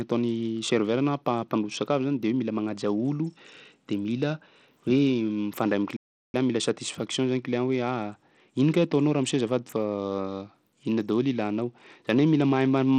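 From the first second to the end, the speech carries plainly audible codec damage. The treble is thin and flickers in and out. A gritty, grainy noise sits on the voice, with a metallic edge from aliasing. This is likely Bluetooth SBC compression at a small bit pool. The weak upper sub-bands get few or no bits, and the rest are coarsely quantised. The damage fits a low rate of about 80 kbps.

At 5.96 s the speech stops dead in mid-flow. Silence holds for about 375 ms, until 6.34 s. Then the sound resumes. This is a playback stall. The player likely ran short of data, or its thread was blocked. With nothing to send, the output went silent until it recovered. The gap is long enough to be heard clearly as a break in the speech.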